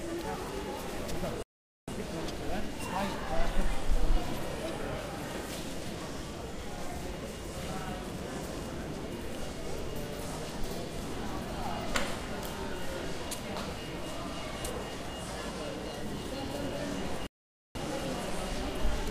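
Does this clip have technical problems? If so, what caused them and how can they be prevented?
Yes. Two playback stalls cut the sound to silence at 1.43–1.88 s (0.45 s) and 17.27–17.75 s (0.48 s), likely because the player's buffer ran dry or its audio thread was blocked. Larger buffering and a high-priority, non-blocking audio thread prevent this.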